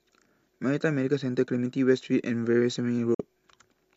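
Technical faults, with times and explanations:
3.14 to 3.20 s: digital broadcast dropout. The speech fades out over 3 ms into a 48 ms hole, consistent with two lost frames. The receiver muted instead of decoding bad data, so that stretch of speech is gone rather than garbled.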